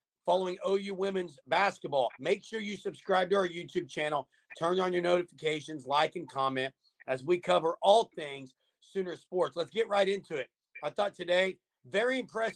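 No technical faults can be heard anywhere in the recording.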